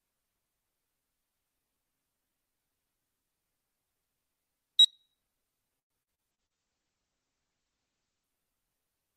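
From 5.79 to 6.58 s, repeated packet loss leaves five gaps, the longest 108 ms, patched by extending prior sound, so about a third turns choppy and robotic. At 6.32 s a call bitrate drop takes the encoding from 48 to 10 kbps, narrowing bandwidth from 20 kHz to 8 kHz; the audio sounds muffled and rough until 8.34 s.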